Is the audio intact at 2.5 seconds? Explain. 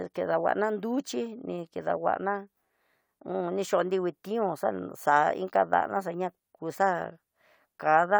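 Yes, the speech at 2.5 seconds plays through intact, with no dropout, click, distortion or other audible fault at that point.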